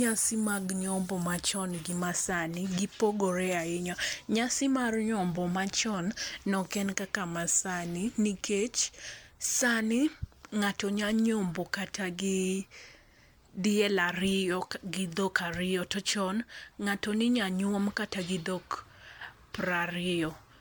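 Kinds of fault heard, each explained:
Generation loss: throughout the speech the sound is swirly, smeared and hollow, with blurred attacks, beyond what one MP3 pass near 128 kbit/s would give. Likely repeated re-encoding, roughly seven passes, each re-quantising on a shifted frame grid so noise and spectral holes accumulate.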